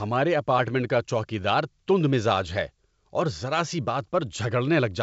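No technical faults are audible.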